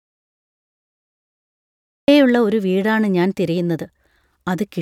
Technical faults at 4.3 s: none

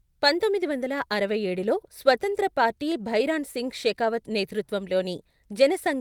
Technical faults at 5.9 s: none

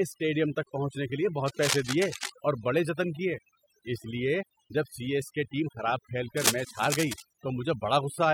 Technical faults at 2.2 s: overdone noise removal; cable scratch noise

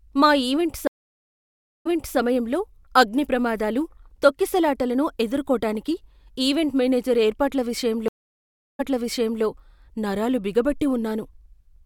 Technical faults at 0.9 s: stream reconnect

